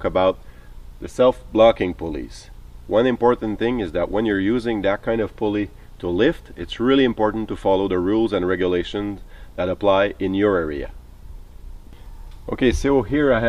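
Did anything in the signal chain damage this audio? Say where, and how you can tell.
No, nothing audible in this clip points to damage at any stage of the signal chain.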